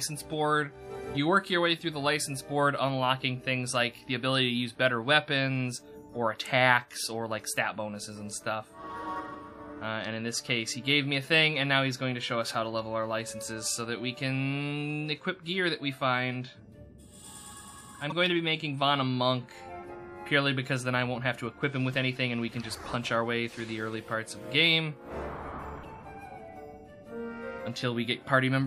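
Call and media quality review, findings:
Damaged data in a compressed stream, two events: 18.10–18.12 s and 25.80–25.85 s. Short chirp or blip in the audio, 26 ms and 56 ms. Probable component: decoder input, the compressed file or stream. Corrupted bytes make the decoder misread frames, lose sync and hunt for the next frame header. Distinguishing trait: a chirp, squawk, click or short hole, usually with a jump ahead in the audio, rather than a smooth masked fill, as from packet-loss concealment.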